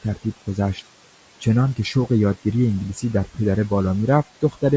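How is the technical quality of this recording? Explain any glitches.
Two faults run through the whole speech clip, so the quality is noticeably compromised from start to finish.

Noise suppressor artifacts are present throughout. The suppressor pulls steady-noise bands down by about 18 dB, so the background sinks in the gaps and comes back under speech.

The speech also sounds rough and grainy, with hiss between harmonics and a synthetic-sounding top end. That's likely low-delay AAC compression, and it fits AAC-ELD at around 32 kbps.

The room noise sits about 19 dB below the speech, and nothing comes through above 8 kHz.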